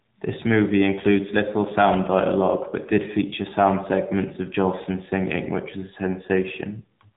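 From start to finish the speech sounds boxed-in and telephone-like, with a plainly audible buzzy, synthetic edge. Nothing above 4 kHz survives, which fits 8 kHz sampling. This is the AMR narrowband mobile codec, AMR-NB. It rebuilds the voice from a vocal-tract model excited by a few pulses per short subframe, and the coarseness of that rebuilt excitation points to a low bitrate of around 7.4 kbps.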